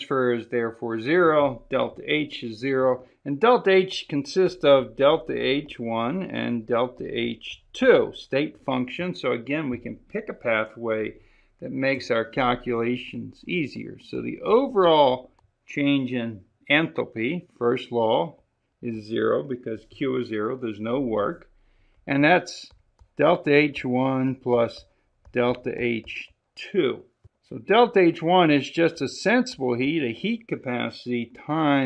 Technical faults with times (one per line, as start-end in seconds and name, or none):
none